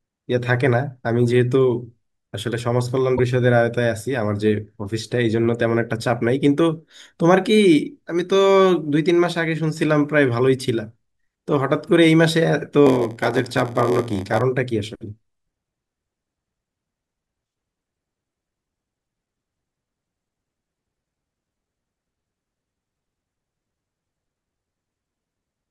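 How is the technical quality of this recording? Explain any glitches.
Two distinct glitches mar the speech. From 3.16 to 3.20 s, damaged data in the compressed stream makes the decoder lose sync and hunt for the next frame, giving a brief glitch. From 12.85 to 14.41 s, a block size mismatch (padded) fills the end of each block with zeros. The stage reading the blocks fits a 512-sample size, so the gaps produce an 86.1 Hz buzz and slow the speech to 0.938 speed while pitch holds, unlike resampling, which would also lower the pitch.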